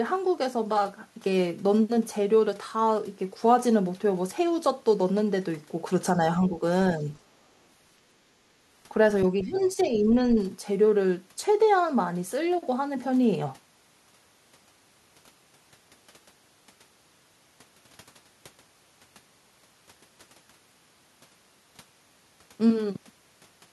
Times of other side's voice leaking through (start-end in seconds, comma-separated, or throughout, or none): 9.39-9.90